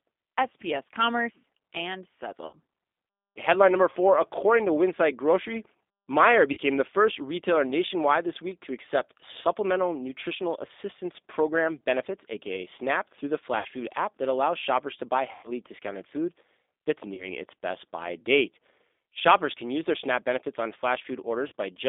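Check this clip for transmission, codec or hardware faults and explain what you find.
Two faults are present: G.729 codec coding throughout, and six bursts of VoIP packet loss concealed by the speech codec.

Across the whole speech clip the sound is narrow, thin and slightly rough and synthetic, confined to roughly 250 Hz to 3.6 kHz. This points to the G.729 codec at 8 kbit/s, which rebuilds speech from a filter, pitch predictor and sparse pulses, discarding fine detail and everything above 4 kHz.

At 2.47–2.56 s, 6.53–6.59 s, 13.59–13.66 s, 15.33–15.53 s, 17.14–17.30 s and 21.48–21.52 s the audio smears into a brief buzzy tone or coloured noise that fades, before recovering weakly. This is VoIP packet loss concealed by the speech codec. Between 40 and 100 ms went missing each time, longest at 15.33 s, and the decoder extended its last pitch and filter while lowering the gain.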